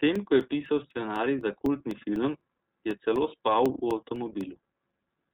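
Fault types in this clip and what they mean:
iLBC codec: Present throughout the speech. This narrowband VoIP codec codes each 30 ms frame's excitation on its own, without drawing on the previous frame. Here nothing passes above 3.9 kHz, so the speech sounds muffled and telephone-like, and the coding damage is plainly audible as a rough, slightly synthetic texture. That combination of damage and bandwidth fits the codec's 13.33 kbps mode.
Periodic USB or driver dropouts: From 0.16 s to 5.16 s, a small piece of audio drops out every 0.25 s, around twenty times in all. This is the pattern of a background task stalling the USB bus or the audio driver at a fixed interval. Each gap is only a couple of milliseconds long and is filled with silence, so the speech carries a steady train of ticks that line up evenly in time.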